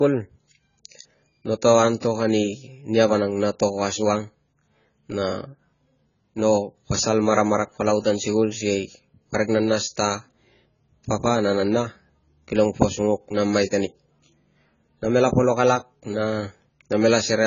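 Speech with AAC compression damage throughout: nothing above 7 kHz, with dull, smeared, warbling sibilants, likely from AAC-LC at a very low bitrate, which fits roughly 16 kbps.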